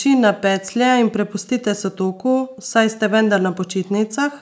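A speech recording with no technical faults to report. It has passed through a call's microphone processing, so the lowest bass is trimmed away by its high-pass filter and nothing sits above 8 kHz, both normal results of that path.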